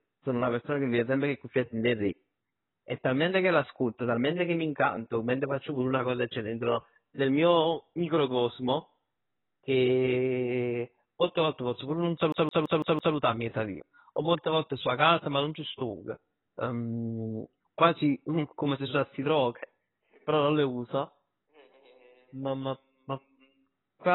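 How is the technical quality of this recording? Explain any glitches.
The technical quality is poor. The whole recording is dull and band-limited, and there is a stuttering skip near the middle.

Throughout the clip, the speech is muffled and smeared. Nothing is heard above 3.9 kHz, and the sibilants have a fizzy, warbling texture. This is likely heavy AAC compression at a very low bitrate, around 16 kbps. An encoder starved of bits drops the upper band and quantises the rest coarsely. Sharp consonants lose their edge, and sustained sounds turn watery.

From 12.32 to 13.16 s, the audio sticks like a CD stuck on one turn. It starts right after "volte pozz pur nun". A 166 ms fragment then plays five times in a row, with a tiny mute at each jump back. This is how a scratched disc behaves when the laser keeps returning to the same track. The result is a fast, perfectly even stutter. Normal playback resumes with "miezz 'a vij".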